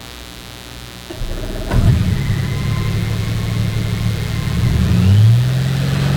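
From start to finish a mains buzz sits under the sound, roughly 20 dB below it. Switching spikes from something like a dimmer, a rectifier or an unshielded run enter the signal twice per cycle of the 60 Hz supply, so the interference is a dense stack of 60 Hz harmonics climbing into several kHz. That upper energy gives it a steady, raspy edge, unlike plain hum, which stays a smooth, low tone near the fundamental.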